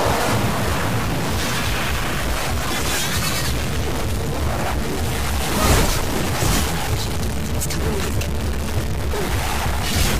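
From start to end, harsh buzzy distortion rides on the sound, and pauses fill with noise. This is likely a stuck bit, adding a step of about -20 dBFS.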